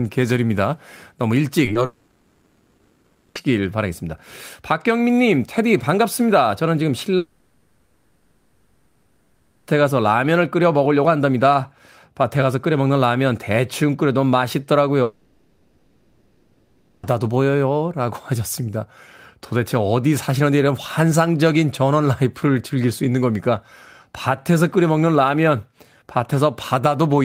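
Right at the start of the speech there are two quick hiccups, at 1.65 to 1.69 s and again at 1.73 to 1.77 s. Both are short concealed packet loss: about 20 ms of audio showed up too late for the decoder, so the receiver patched each hole by carrying the previous sound forward and easing back into the real signal. You hear them as a tiny smear or wobble, and a brief consonant could get swallowed.

Just after that, from 1.85 to 3.37 s, the audio turns into a stretched-out buzz or hiss instead of speech, and the same thing happens at 7.17 to 9.69 s and 15.03 to 17.05 s. That's likely a long network dropout each time. The receiver keeps extending the last sound across the whole gap of 1.5 s, 2.5 s and 2 s respectively, with no silence at all, and when real speech returns, whatever fell in that stretch is simply gone.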